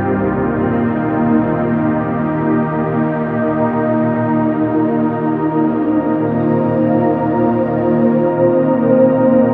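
No technical faults are audible anywhere in the audio.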